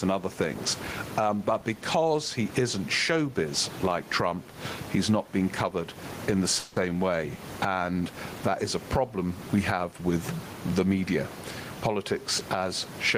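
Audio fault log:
Throughout: gain pumping. The level moves by roughly 15 dB. The room noise sits about 28 dB under the speech. Loud and soft passages end up close in level, so the sound is squashed and breathes. The likely cause is input gain set far too high, with a fast limiter or compressor pulling it down on each peak.
6.59–6.90 s: call audio freeze. It comes after "being covered in the" and before "way and that is". Packets likely stalled in transit, and the jitter buffer ran dry. The receiver filled about 170 ms by stretching the last sound into a fading buzz or hiss. When the packets arrived, the audio picked up where it had stopped. Nothing is lost, but everything after this point runs about 170 ms late.
11.88–12.66 s: jitter buffer speed-up. The buffer had built up more delay than its target. To work it off, the receiver cut many short pitch-period pieces in a row, about 70 ms in total. 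The speech plays at about 107% of its normal speed. The pitch stays the same, so it just sounds slightly hurried.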